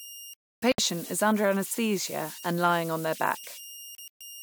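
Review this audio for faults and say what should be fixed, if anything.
Converter idle tones run through the whole speech clip: a whistle around 3 kHz, about 17 dB below the signal, sits in the pauses and turns grainy under quieter passages. An undithered delta-sigma converter settles into repeating bit patterns when its input is small, and those patterns produce the tone. Unlike mains hum or a fixed interference whine, its pitch follows the input's offset rather than staying locked. Adding proper dither at the converter prevents it.

Digital broadcast dropout occurs twice. From 0.34 to 0.79 s the sound mutes, about 352 ms lost across 448 ms with the longest gap 288 ms, before "is under anaesthesia and" resumes. From 3.95 to 4.21 s about 160 ms is lost over 256 ms, longest 128 ms. The hole sizes fit frames of roughly 32 ms. The receiver muted on failed frames, and the audio sent during those gaps is gone. 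Unlike an editing cut or a gated silence, the programme carries on in time with nothing skipped. Stronger reception or more robust error protection prevents it.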